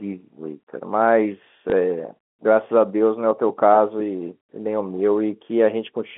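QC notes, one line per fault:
1.70–1.72 s, packet loss with last packet repeated: a brief small blip where 20 ms of audio went missing, consistent with a single lost packet, and the previous stretch was played again to fill it. On the waveform, a repeated 20 ms block. On the spectrogram, a 20 ms repeated stretch within the 200–3400 Hz telephone band.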